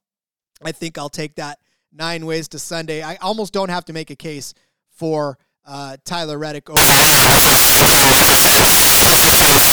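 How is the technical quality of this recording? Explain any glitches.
Clean until the last few seconds, then it falls apart. From about 6.77 s to the end, the samples are built from the wrong bytes. The reader assembles each sample's bytes incorrectly, so the fast-changing low bits take over, and the speech turns into loud, harsh broadband noise.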